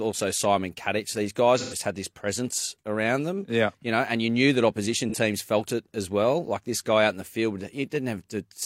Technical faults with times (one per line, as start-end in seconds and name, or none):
1.57-1.78 AAC frame loss with concealment
5.09-5.14 AAC frame loss with concealment